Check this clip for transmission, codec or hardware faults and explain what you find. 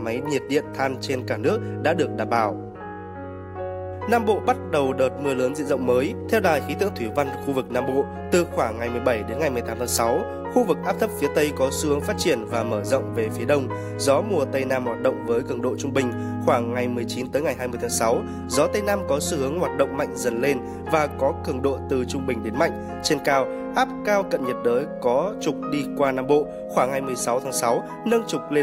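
No faults can be heard anywhere in the recording. Nothing in the signal calls for any comment on how it was carried or captured.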